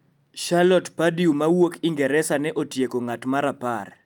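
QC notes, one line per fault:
No technical faults were heard anywhere in the speech signal.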